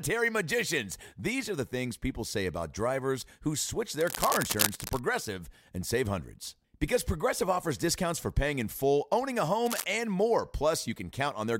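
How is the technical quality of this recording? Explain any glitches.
Two short glitches spoil it, both cable scratch noise. The first runs from about 4.0 to 5.0 s, the second is a brief flick from 9.66 to 9.84 s. Each is a dense, ragged burst of scratchy rustle laid over the sound, nearly as loud as the audio itself. The likely cause is a worn cable, plug or control being moved, so its contact resistance jitters rapidly and injects that uneven noise into the signal.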